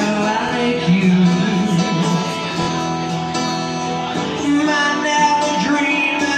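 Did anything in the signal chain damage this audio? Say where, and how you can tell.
Yes, the wireless link did, three times. There's Bluetooth stutter at 0.49–0.53 s, 2.63–2.69 s and 6.04–6.07 s: a short slice repeats, giving a quick buzzy hiccup, and the sound then picks up further along as if it never paused. The first and last drop about 23 ms, which fits one lost packet, and the middle one about 46 ms, roughly two. It's the receiver replaying its last buffer while it waits for late or missing data over the air.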